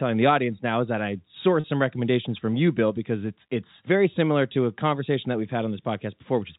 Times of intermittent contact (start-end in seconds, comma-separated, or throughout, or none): none